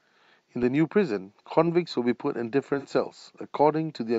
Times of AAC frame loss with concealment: 2.78-2.86

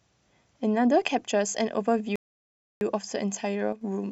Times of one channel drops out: 3.72-3.81

